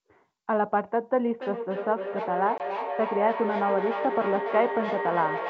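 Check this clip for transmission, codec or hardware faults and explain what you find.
Two faults are audible: a feedback echo between two devices through most of the clip, and a brief packet loss on the ADPCM call.

From 1.34 s to the end, a second device in the same room is playing back what the first device's microphone sent, and that microphone captures it again. Each device's echo canceller removes only its own playback, so this loop goes uncorrected. The speech returns roughly every 300 ms, each pass thinner and more ringing, with the loudest repeat about 6 dB below the direct speech.

From 2.58 to 2.61 s, about 20 ms of audio was dropped and filled with silence, which fits a single lost packet. The decoder's adaptive predictor and step size then no longer matched the sender's, so the hard-edged gap is followed by speech that comes back slightly distorted, settling within a few tens of milliseconds. 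The wideband G.722 coding keeps speech clear up to about 7 kHz with, at most, a faint hiss in the upper band.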